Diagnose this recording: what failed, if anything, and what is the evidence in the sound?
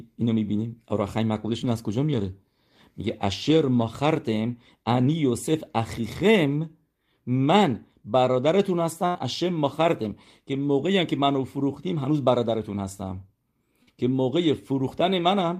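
The network stage dropped audio in transit, a burst of packet loss at 9.07 to 9.18 s. Roughly 80 ms of speech never arrived, and the receiver covered about 74 ms of it by extending the last sound while lowering its level, so it sounds like a held sound fading out before speech resumes further along. On a spectrogram the spectrum runs flat and unchanging, then dims. The waveform shows a decaying stretch followed by an abrupt jump to new material.

A short concealed packet loss, also at the network stage, occurs at 13.83 to 13.90 s. About 40 ms failed to reach the decoder in time, and roughly 41 ms of substitute audio was synthesised from the preceding sound and cross-faded back into the real signal. It comes across as a brief smear or wobble. A spectrogram shows a thin band where the formant detail blurs and stalls, and the waveform shows a short, overly steady stretch with a soft seam on either side.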